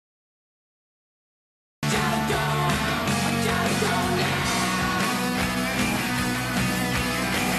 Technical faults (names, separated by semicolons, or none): cut-off start